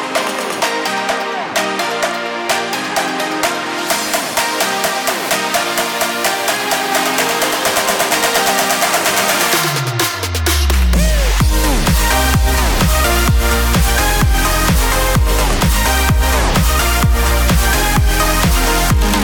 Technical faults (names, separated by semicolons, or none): doubled audio track